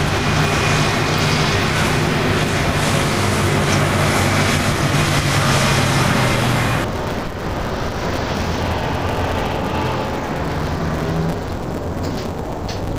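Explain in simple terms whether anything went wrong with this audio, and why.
From 6.84 s to the end, the sound turns dull and robotic, with a steady buzz at about 172 Hz. That is interleaved audio read as planar. The left and right samples come in alternating order, but the playback takes the first half of each short chunk as left and the second half as right. The chunks last about 5.8 ms, which fits a 256-sample block. Because the chunks are so short, there is no clear drop in pitch, just this buzzy, smeared texture.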